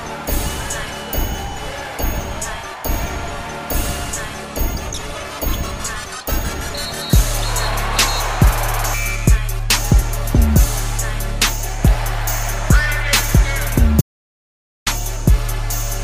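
Near the end, the sound cuts out abruptly at 14.01 s and returns at 14.86 s. That is an audio dropout to silence. For about 0.85 s the signal falls to silence, with no room tone or noise floor underneath. The cause is likely a brief loss of input, such as a loose connection, a failed link or an accidental mute, while recording carried on. Whatever sounded during that gap is lost.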